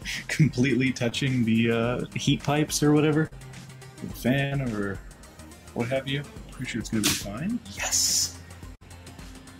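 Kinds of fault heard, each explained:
Short concealed packet loss: small stretches of the call arrived too late to decode, so the receiver extended the preceding sound and blended back. At 1.09 s about 20 ms is patched and at 3.27 s about 40 ms, each heard as a brief smear or wobble.
Burst of packet loss: consecutive packets went missing, and the receiver stretched the last sound while fading it out before the audio picked up later on. At 4.45 s and 8.75 s roughly 60 ms drops out, replaced by a short held buzz or hiss.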